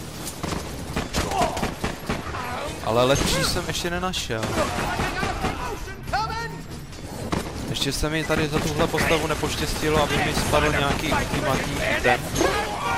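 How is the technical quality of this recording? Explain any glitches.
No glitches or technical faults can be heard anywhere.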